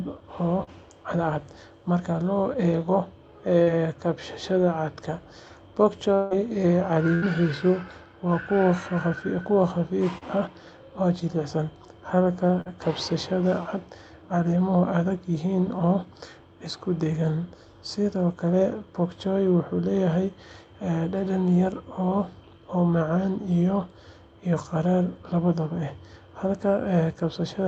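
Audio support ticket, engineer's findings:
Short concealed packet loss at 0.63, 3.63, 10.18 and 12.61 s: brief smears or wobbles, roughly 40 ms each. Jitter buffer missed a packet; the decoder stretched the previous sound to cover it, then blended back in.

6.14 to 6.34 s: about 160 ms where the sound turns into a fading buzz/hiss continuation, then picks up further on with that chunk gone, no true silence. Likely a long network dropout, concealment covering the whole gap.

Burst of packet loss, 7.15 to 7.25 s: roughly 80 ms gone in one go. The last sound is held and ramped down as a buzz or hiss, then audio resumes past the hole. Consecutive packets were lost or arrived too late to play.

All of this sits on a codec path whose top end stops at 8 kHz, which fits Opus.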